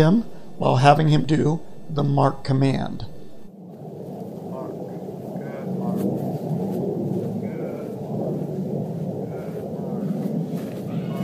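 No technical faults can be heard anywhere in this recording.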